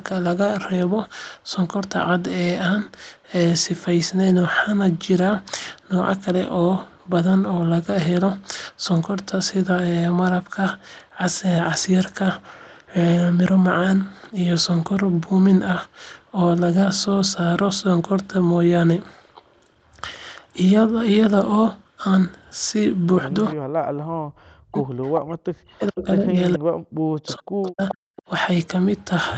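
Speech recording, and from about 23.89 to 26.37 s and again 26.55 to 28.13 s the talker keeps dipping, sometimes by around 40 dB, which is speech suppressed in double talk, likely the echo canceller ducking everything while both sides spoke. Echo leak shows up as short scraps at 25.98, 27.28, 27.67, 27.88 and 28.16 s, a copy delayed 429 ms and roughly 10 to 25 dB down, presumably residue a speakerphone's canceller let through.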